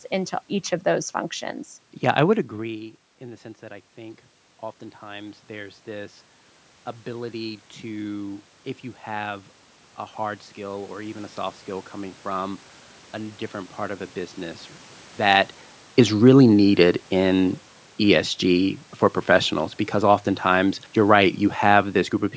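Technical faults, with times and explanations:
2.53–5.87 s, automatic gain rising: after "I would" the input drops by about 16 dB, so the gain control lifts about 6 dB, swelling voice and room noise together. The waveform envelope widens gradually, and the spectrogram's noise floor brightens.
15.17–21.87 s, automatic gain falling: a louder input prompts the gain to ease down about 6 dB over nearly seven seconds. The waveform tapers steadily as speech and background darken together on the spectrogram.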